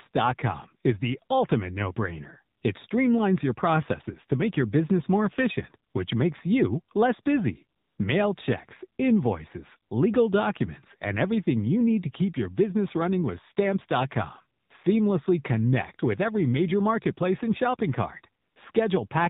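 From start to finish the speech carries the sound of the AMR narrowband mobile codec. Nothing above 4 kHz survives, so the voice sounds thin and boxed in. The codec rebuilds each 20 ms frame from a vocal-tract model and a few pulses. At this low rate the rebuild is coarse, giving a plainly audible buzzy, synthetic edge. That fits a bitrate near 7.4 kbps.

AMR comfort noise then appears six times. The codec judged the talker silent and sent no speech frames. The receiver filled each gap with smooth synthetic noise. The first two gaps run 2.58 to 2.62 s and 5.90 to 5.94 s, about 40 ms each. The longest runs 7.78 to 7.98 s. Later gaps run 14.60 to 14.70 s, 18.42 to 18.56 s, and 18.72 to 18.74 s. In each one the real background drops out and a steady hiss switches in.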